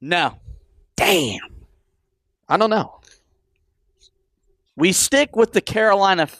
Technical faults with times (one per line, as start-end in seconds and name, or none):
none